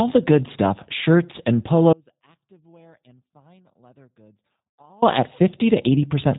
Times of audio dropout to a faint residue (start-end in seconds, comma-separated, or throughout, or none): 1.93-5.02